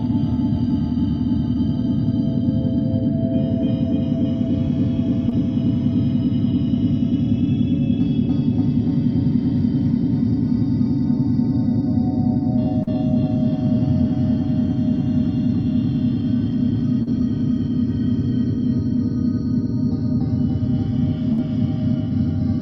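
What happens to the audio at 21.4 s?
There's a burst of packet loss from about 21.33 to 21.40 s. A run of packets never arrived in time, so the receiver stretched the last bit of sound and faded it for about 50 ms, then picked back up with roughly 40 ms simply gone.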